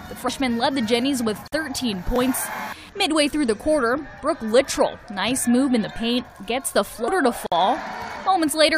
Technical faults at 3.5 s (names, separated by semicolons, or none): none